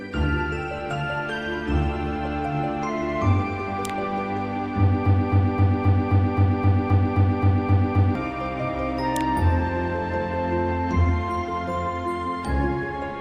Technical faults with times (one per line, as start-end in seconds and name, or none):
5.06-8.15 broken-record loop